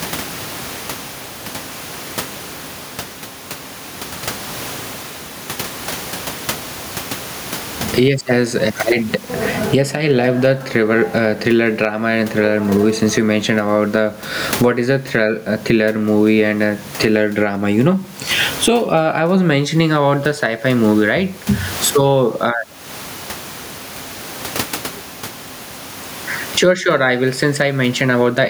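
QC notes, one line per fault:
throughout, gain pumping: input gain is likely far too high, so a fast limiter clamps down on each loud syllable and releases in pauses, swinging around 20 dB. Room noise sits about 34 dB below the speech, which is left squashed.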